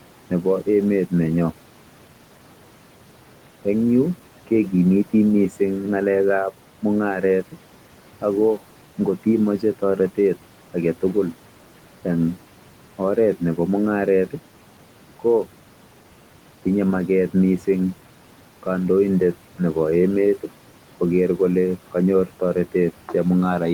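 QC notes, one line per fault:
Throughout, noise suppressor artifacts: the steady room noise, sitting about 18 dB below the speech, drops by about 12 dB in the pauses and climbs back up whenever speech starts. The suppressor judges, frame by frame, which frequency bands carry only stationary noise and turns those down. Because its gain follows the speech, the background pumps in and out with each phrase instead of holding a constant level.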